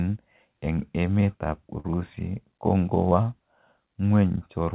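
At 1.80 s, a short concealed packet loss. About 40 ms never arrived; the receiver extended the preceding sound, leaving a brief smear in band-limited, 4 kHz-capped speech.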